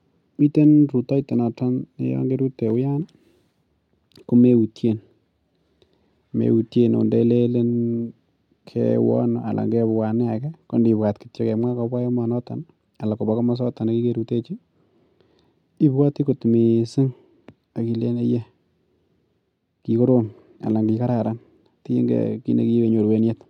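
No technical faults are audible.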